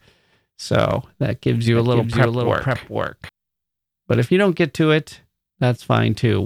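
From 1.75 s to 3.29 s, just after "that gives you", a doubled audio track appears: a second full-band copy of the speech runs about half a second behind, only about 5 dB quieter. It is likely a second capture through a slower path or two out-of-step copies left in an edit. Unlike an echo or reverb, the copy has no decaying tail or room colour, and it starts and stops abruptly rather than fading.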